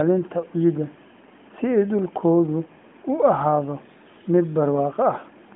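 No technical faults are audible.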